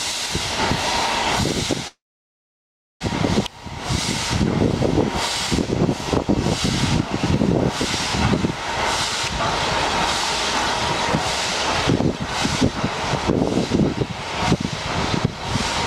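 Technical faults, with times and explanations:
1.87–3.03 s, call audio freeze: the sound stops, a brief fading tail gives way to about 1.04 s of silence, then resumes where it left off. Nothing is lost, but everything after runs 1.13 s late, likely from delayed packets draining the jitter buffer.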